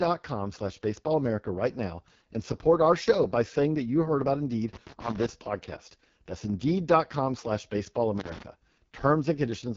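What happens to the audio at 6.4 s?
At 6.4 s the speech sounds rough and raspy, with a buzzy, synthetic edge and nothing above 7.5 kHz. This is not a local event: the whole clip carries heavy AMR wideband (HD Voice) codec damage. The codec rebuilds speech from a pulse-excited vocal tract model up to 6.4 kHz and fills the band above with shaped noise. The harshness points to its lowest mode, around 6.6 kbit/s, where too few bits remain for a natural voice.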